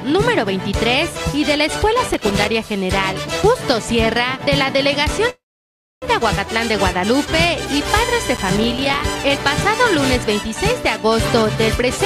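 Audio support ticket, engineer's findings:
Processor overload crackle, 2.14–2.45 s and 8.36–9.04 s: processing repeatedly missed buffer deadlines, roughly 15 misses then about 40, fitting buffers of a few milliseconds. Each miss played as a short silent gap, heard as gritty crackle over the sound.

Call audio freeze, 5.29–6.05 s: likely delayed packets draining the jitter buffer. Playback stalls, a short fill trails off into about 0.63 s of silence, then resumes where it stopped. Nothing lost, but everything after runs 0.73 s late.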